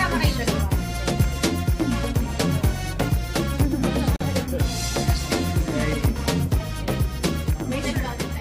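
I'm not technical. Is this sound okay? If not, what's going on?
No. At 4.16 seconds there is a gap at a join of encoded pieces: a brief silence of about 43 milliseconds where two separately made sections were stuck together. Unlike a dropout, no sound is lost; it picks up exactly where it stopped.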